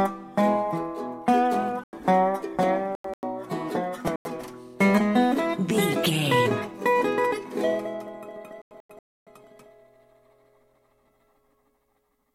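The audio drops to dead silence four times, at 1.84–2.07 s, 2.95–3.23 s, 4.07–4.42 s and 8.62–9.27 s, each gap beginning abruptly. This is corrupt frame muting: damaged compressed frames were rejected by the decoder and replaced with silence, the hole lengths pointing to runs of several frames, the last roughly twice as long. Timing holds, so material resumes in place. A waveform shows flat near-silent stretches with hard edges; a spectrogram shows blank vertical bands.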